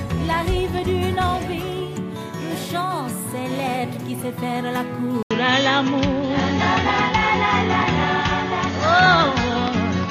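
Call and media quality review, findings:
Input switched to a poorer device at 5.23 s, through to the end. Short dropout of about 80 ms at the switch, then the sound goes duller, with nothing above 6.7 kHz. Level shifts by roughly 5 dB, plus a new noise floor sitting around 35 dB under the signal. Likely the capture path jumped to a different mic or a headset call profile, which brings its own narrower band, tone and hiss.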